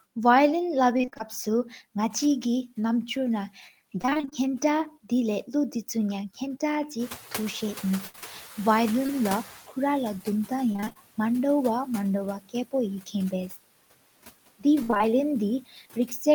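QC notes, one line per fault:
throughout: noise suppressor artifacts. Steady background is pulled down by about 16 dB, band by band, frame by frame, so it dips in pauses and swells back under the speech. This comes from the gain per band changing quickly over time rather than holding steady.
0.97–1.21 s, 4.01–4.33 s, 8.07–9.10 s, 10.72–10.97 s, 14.83–15.02 s: repeated packet loss (robotic sound). Each burst is a cluster of short holes, mostly around 20 to 27 ms. The longest are 62 ms near 8.1–9.1 s and 58 ms near 14.8 s. The receiver fills each hole by stretching the last bit of sound. In most bursts about half the span is patched this way, so the speech turns choppy. The 8.07–9.10 s run is sparser, about 12 % patched.
6.99–9.62 s: noise suppressor catching up. Room noise jumps by about 14 dB near 7.0 s. The suppressor's noise estimate lags, so the louder background comes through with less reduction at first. 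It then sinks gradually over roughly 2.6 s as the estimate adapts, ending about 11 dB lower. The room noise itself is real and not a fault. It settles about 18 dB below the speech.
15.61–16.26 s: speech cut by the noise suppressor. Near the end, quiet parts of the speech are mistaken for noise and turned down with the background, by up to about 14 dB. Around a third of a second in total is affected. The cut parts sound swallowed or faint.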